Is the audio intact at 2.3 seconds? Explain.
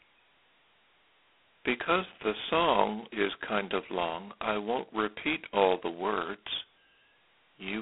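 No. At 2.3 seconds, as throughout the clip, the speech carries heavy G.726 ADPCM damage. Each sample is coded coarsely as a difference from a prediction, which fits the 16 kbit/s mode. A harsh, rasping hiss tracks the speech level. Nothing passes above 3.8 kHz.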